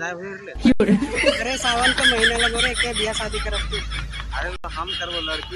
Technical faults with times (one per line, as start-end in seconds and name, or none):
0.72-0.80 underrun with held sample
4.56-4.64 underrun with held sample